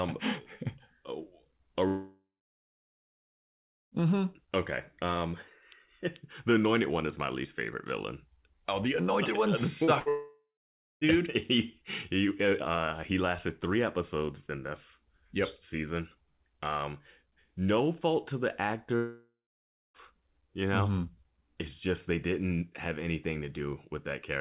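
At 1.88 s the speech cuts out until 3.94 s. This is a long network dropout, likely from no packets arriving for about 2 s. The last sound is stretched into a fading buzz or hiss, then about 1.7 s of silence. Speech resumes with that stretch missing.

From 9.85 to 9.90 s there is short concealed packet loss. About 30 ms of audio never arrived. The receiver filled the hole by extending the preceding sound and blending back in. It is heard as a brief smear.

From 9.99 to 10.09 s comes a burst of packet loss, about 60 ms missing. The last sound is held and turned down as the gap runs. It becomes a short fading buzz or hiss, and the sound in between is gone.

That burst runs straight into a second long network dropout, lasting until 11.04 s. About 0.93 s is lost. A fading fill gives way to roughly half a second of silence. Speech returns at "he he uh he".

Just after "no fault to the", a third long network dropout runs from 18.96 to 19.97 s. 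About 1 s is missing. The tail fades out and about 0.6 s of silence follows before speech resumes. The G.711 call path limits the band to below 4 kHz throughout.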